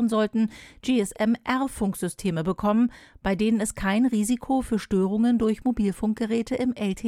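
No technical faults are audible.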